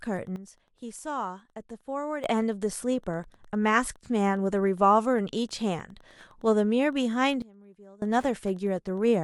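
From the first moment to the end, Wi-Fi interference sits under the speech: a steady tick repeating every 102.4 ms, roughly ten times a second, well below the speech in level. A nearby radio's beacon bursts are being rectified by the audio circuit. On a spectrogram this shows as a comb of thin vertical broadband lines at regular spacing, and the waveform carries small evenly spaced spikes.

At 0.36 s the speech and the background noise drop together by 12 dB in a single step, then snap back up at 2.24 s. This is a sudden gain jump, likely a digital gain change applied between one sample and the next with no ramp. The waveform envelope shows a hard-edged rectangular dip, and the spectrogram darkens uniformly across all frequencies for that span. A second, deeper gain jump of 24 dB runs from 7.42 s to 8.02 s, with the same abrupt edges at both ends.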